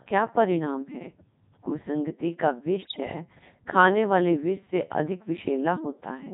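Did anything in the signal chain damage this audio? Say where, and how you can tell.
Yes. Codec 2 vocoder at 3.2 kbit/s, in the codec stage, runs throughout: the speech is robotic and buzzy because the decoder rebuilds it from sine waves using only pitch, voicing, energy and spectral envelope, never the original waveform. The damage is heavy.

Bit errors on digital voice radio hit from 2.82 to 3.00 s. Roughly a tenth of the bits arrived flipped, corrupting about eight frames' worth of pitch, level and voicing parameters. The synthetic voice jumps in pitch and tone and dissolves into warbling gibberish.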